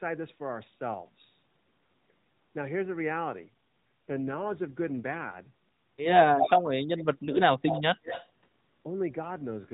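From 3.32 to 6.06 s, and again from 9.24 s to the end, there is an AMR rate drop from 12.2 to 5.9 kbps, with the freed bits going to error protection. The sound turns buzzier and more synthetic. Unlike a dropout, there is no gap, and the band stays where the 12.2 kbps AMR-NB call already holds it, with nothing above 4 kHz.

Echo leak appears at 6.39 to 6.50 s, 6.98 to 7.03 s, 7.69 to 7.81 s and 8.04 to 8.27 s. It is likely a loudspeaker's echo canceller letting its pickup back through. What returns is a single delayed copy, 177 to 188 ms late, at about speech level in the first event and then about 35, 10 and 15 dB down. That lag separates it from a second talker.

Between 6.72 and 7.81 s, the sound on the loudspeaker side dips by up to about 35 dB across roughly 0.7 s in pieces. This is speech suppressed in double talk, likely the echo canceller turning down its own talker along with the echo. 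It is a level cut, not the roughening of a rate drop.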